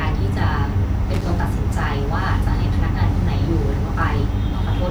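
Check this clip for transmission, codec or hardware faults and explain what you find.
One hardware fault is present: loose connector crackle from 1.14 to 1.21 s. A worn or dirty contact in the signal path briefly made and broke connection, chopping the speech, heard as a short irregular burst of crackle about 76 ms long.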